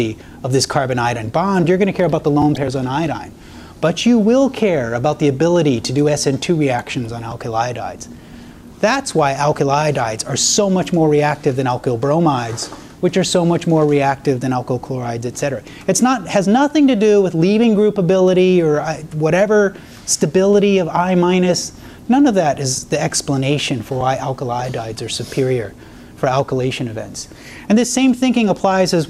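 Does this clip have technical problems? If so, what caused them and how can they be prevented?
Yes. DAB burbling occurs from 2.55 to 2.64 s. Bit errors of around 0.15 percent slip past error correction and corrupt MP2 scale factors and samples. Single sub-bands then jump in level, producing short blips of noise rather than the clean silent gap of a dropout. A stronger signal or a better-placed antenna prevents it.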